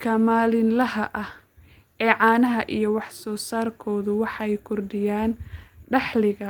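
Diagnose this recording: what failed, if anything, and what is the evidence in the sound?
Nothing failed in this speech recording. No stage, from capture to playback, leaves any audible evidence of a fault.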